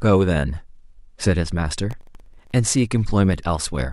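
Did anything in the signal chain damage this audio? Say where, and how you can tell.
Yes. At the driver and buffer stage, the processor fell behind and repeatedly missed its deadlines for filling very short audio buffers, each well under a millisecond. From 1.91 to 2.52 s the speech carries processor overload crackle. Around twenty missed buffers each drop to silence with abrupt edges, and those tiny hard-edged gaps add up to a gritty, tearing crackle over the speech. It stops once the load eases.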